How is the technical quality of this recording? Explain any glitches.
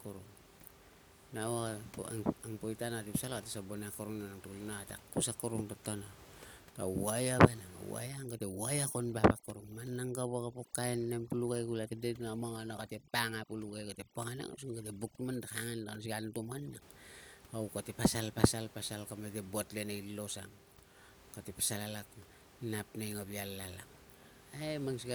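One glitch stands out against room noise sitting about 22 dB below the speech. From 8.09 to 16.82 s the background breaks up into twinkling specks in near-silent gaps: overdone noise removal, an overly aggressive reducer switching off bands it mistakes for noise.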